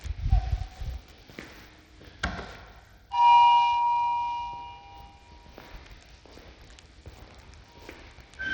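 From start to finish, the top of the sound is capped. Nothing is present above 18.7 kHz. The highest treble thins and flickers rather than holding steady. A gritty, grainy texture sits on the whole clip, with aliasing. The damage is plainly audible. This is likely Bluetooth SBC compression. Its coarse sub-band quantisation starves the weakest top bands of bits, which fits a low bitrate near 80 kbps.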